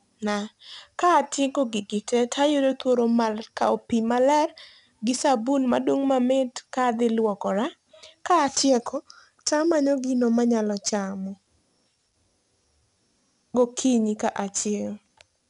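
Throughout, 4-bit ADPCM compression adds gritty hiss that tracks loud speech. Nothing sounds above 10.7 kHz, which fits an 88 kbps stream at a low sample rate.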